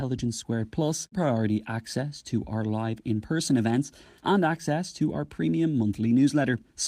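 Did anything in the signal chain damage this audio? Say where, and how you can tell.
No, nothing in the signal chain has damaged this speech recording. None of the stages from capture to playback leaves any mark that can be heard.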